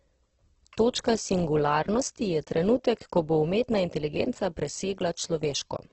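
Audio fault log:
Throughout: Opus compression, likely at a low bitrate around 12 kbps; nothing above 8.1 kHz, and starved bands filled with noise make the speech rough and grainy.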